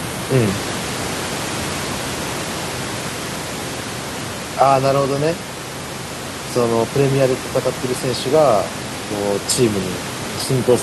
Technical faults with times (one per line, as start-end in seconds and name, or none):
none